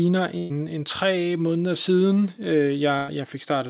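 At 0.38 to 0.52 s and again at 2.98 to 3.10 s, a burst of packet loss drops roughly 120 ms and 100 ms of the speech. The receiver stretches the last sound into a fading buzz or hiss, and the speech then jumps ahead. On a spectrogram, each gap appears as flat, smeared bands that dim before the speech resumes, everything sitting below 4 kHz as the narrowband call path points to G.711.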